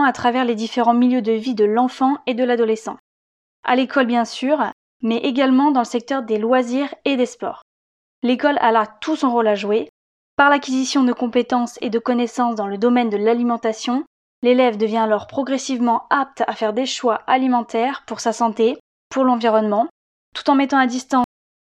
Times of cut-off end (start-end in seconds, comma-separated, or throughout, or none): 21.24-21.63